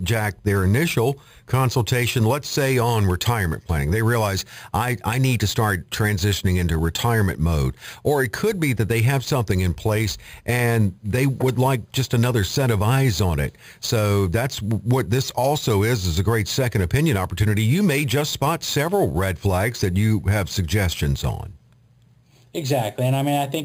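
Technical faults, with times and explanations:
Throughout, imaging from sample-and-hold upsampling: a metallic fizz following the speech, about 17 dB down, between 5.5 and 11 kHz, which fits an 11 kHz original held, not filtered.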